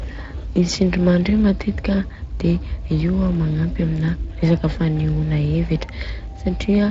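From start to finish the speech carries plainly audible Speex codec damage: the excitation is coded coarsely, so voicing sounds hoarse and noisy, consistent with a bitrate near 20 kbps. A spectrogram would show grainy, smeared harmonics rather than clean, sharply defined striations.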